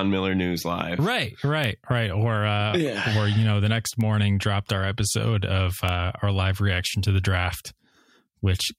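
Bit error spikes at 1.64, 4.01 (after "you know the next") and 5.89 s: single flipped-bit samples, peaking near about -9 or -15 dBFS, heard as sharp ticks; one-sample waveform needles, full-height spectrogram lines.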